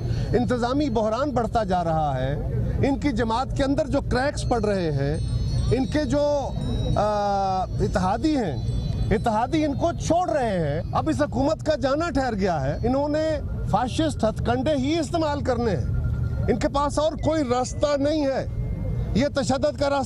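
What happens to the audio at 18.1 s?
The sound slows and sags about a semitone flat from 17.21 s, snapping back at 18.12 s: a drift correction step, likely clock-matching software dropping playback speed 5.5%.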